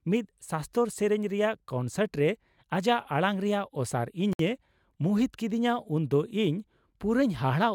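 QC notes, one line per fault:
4.33–4.39 s, gap at a join of encoded pieces: the speech drops out in a gap of about 63 ms, then picks up right where it left off. Two separately encoded chunks were butted together with their encoder start delay and end padding left in, and the codec smears the gap's edges.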